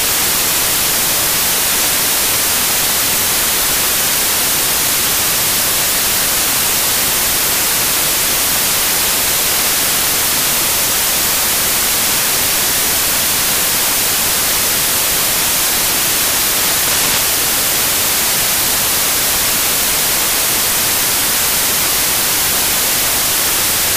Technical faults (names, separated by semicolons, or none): samples built from the wrong bytes